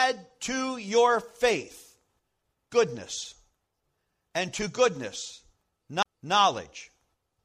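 At 6.03 s, just after "and to goodness", the speech hits a CD skip. The laser is knocked off its track and lands on a different turn of the spiral. The player mutes for roughly 30 ms, which comes across as a short tick, and then picks up the speech from another point. What sets this apart from a plain dropout is that the audio isn't only silenced briefly. It resumes displaced in time.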